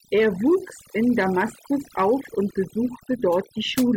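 Overdone noise removal runs throughout the speech: a noise reduction stage set far too aggressively keeps cutting frequency bands near its noise estimate, taking quiet parts of the voice with them. The background drops and breaks up into twinkling specks.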